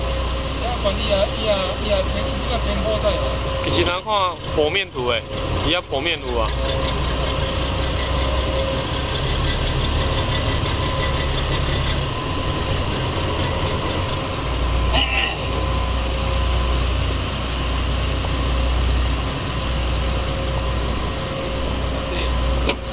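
No technical faults can be heard anywhere in this audio.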